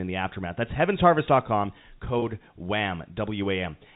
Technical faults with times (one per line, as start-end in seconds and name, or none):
2.19-2.22 packet loss with pitch repetition